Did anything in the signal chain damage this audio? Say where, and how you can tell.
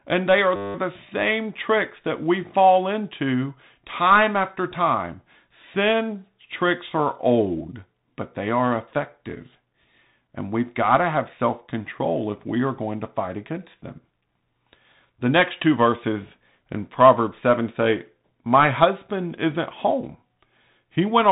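Yes. The codec stage damaged the whole clip. This speech is band-limited, with nothing above about 3.8 kHz. A granular hiss sits under it, and s sounds turn scratchy. That is the signature of the Bluetooth CVSD headset codec, and it fits a 64 kbps CVSD stream. CVSD sends one bit per sample, up or down, with an adaptive step. Fast, loud high content outruns that step and distorts. The damage is plainly audible.

There is also a system hang loop at the driver or buffer stage, from 0.56 to 0.75 s. It falls just after "they are" and before "the same tricks that". A 10 ms slice of audio repeats exactly, about nineteen times. At that loop length it becomes a steady 100 Hz buzz, not a stutter. The host froze while the hardware kept replaying its ring buffer. Little or no audio is lost around the loop.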